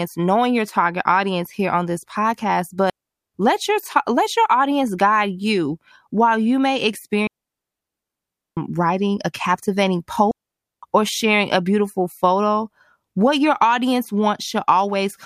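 Digital wireless dropouts hit three times. The first runs 2.90 to 3.34 s, after "here on this podcast". The second, 7.27 to 8.57 s, follows "you may". The third, 10.31 to 10.83 s, follows "writing a captivating". Each time the receiver lost too much data and muted. Each gap is clean near silence, with no noise burst around it.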